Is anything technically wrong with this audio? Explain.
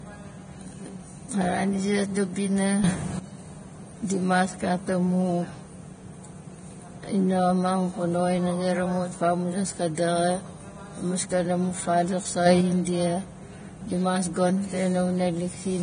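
Yes. Throughout the speech there is heavy damage that is likely from Vorbis compression at a low bitrate, around 23 kbps. Nothing remains above 9.7 kHz, and the treble is quantised so coarsely that detail turns to grainy hiss. Unlike broadband noise, this hiss follows the speech.

There are also two sudden gain jumps. The level steps up by about 12 dB from 2.84 to 3.19 s, and by about 5 dB from 12.46 to 12.61 s. These are likely gain changes applied without a ramp. Speech and background rise together, which sets them apart from someone simply speaking louder.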